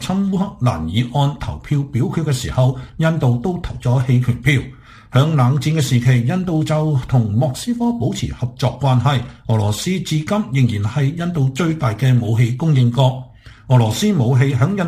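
Crude rate conversion runs through the whole clip, from start to finish. The sound seems to have been resampled by simply picking the nearest existing sample rather than filtering, and the small sample-repeating pattern fits a step from 44.1 kHz up to 48 kHz. The resulting error sits roughly 30 dB below the signal and forms shifted, inharmonic copies of the content, heard as a gritty, inharmonic fizz that rises with loud and bright passages.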